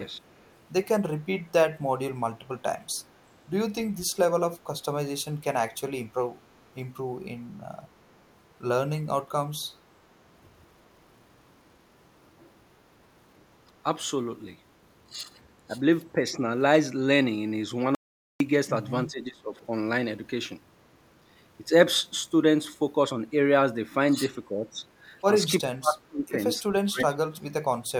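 Right at the start, from 0.39 to 0.49 s, there's a very faint echo leak: a ghost copy of the voice trailing about 355 ms behind, sitting far below the main level. It's likely a speakerphone on the far end whose echo canceller let a scrap of its own loudspeaker output back into the mic. It's brief and easy to miss, but the delay gives it away.

Around 15.68 to 15.75 s and again at 16.13 to 16.19 s the voice dips slightly, only a few decibels, for about 70 ms each time. That's speech suppressed in double talk, likely the echo canceller mistaking the talker for echo while the other side was also speaking, and ducking everything.

Then at 17.95 s the audio drops out to silence for about 453 ms, until 18.40 s. It's dead digital silence with no room tone, so whatever was said in that gap is simply gone. That points to a likely brief loss of the input, like a link hiccup or momentary mute, with silence written in its place.

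After that the double-talk suppression gets heavier. From 19.07 to 19.55 s the voice sinks a good 20 dB or so, and from 24.52 to 24.80 s there's a milder dip. The worst stretches are 25.68 to 26.38 s and 26.70 to 27.74 s, where the talker is pushed down by roughly 30 dB or more and nearly vanishes in chunks, which sounds like the canceller clamping down hard while both sides talk over each other.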